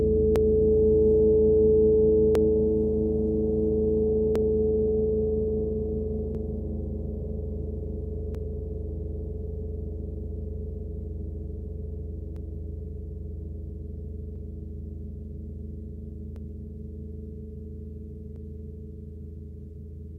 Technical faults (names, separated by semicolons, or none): periodic USB or driver dropouts